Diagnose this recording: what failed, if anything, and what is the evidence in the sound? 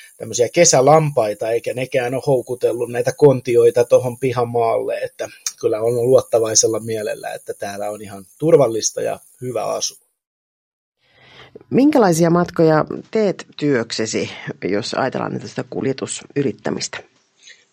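At 12.92 s the sound changes character with no gap and stays that way to the end: nothing survives above 8.2 kHz, the level falls by roughly 5 dB, and a new background noise appears, sitting around 45 dB under the signal. The failure sits at the driver and device-selection stage. The likely cause is an input switched to a poorer device, whose narrower passband, lower gain and own noise floor replaced the original microphone's in mid-recording.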